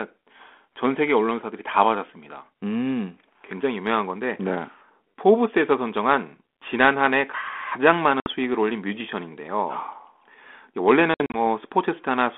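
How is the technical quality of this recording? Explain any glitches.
Telephone-band speech, limited to roughly 250 Hz to 3.4 kHz, with the light grain of G.726 ADPCM at what sounds like 32 kbit/s. It has two glitches, both packet loss on an ADPCM call.

At 8.20 s, a hard-edged hole of about 60 ms cuts the sound. From 11.14 s to 11.38 s, about 120 ms of gaps are scattered over 200 ms, the longest run 60 ms. The lost packets become silence. The decoder's predictor and step size drift from the sender's, so the speech returns slightly distorted before settling. That distorted recovery is what separates this from a plain dropout.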